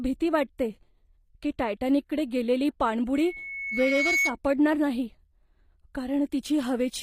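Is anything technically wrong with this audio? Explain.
Yes, two faults. Throughout, speech passes through what is likely HE-AAC compression, its treble rebuilt from copied lower bands, which fits about 24 kbps; sibilants sound plainly grainy, with nothing above 15.4 kHz.

From 3.15 to 4.36 s, just after "की टायटॅनिकडे गेलेली", a microphone re-amplifies its own loudspeaker: a loudspeaker feedback squeal at 2.2 kHz swells over about a second to roughly speech level.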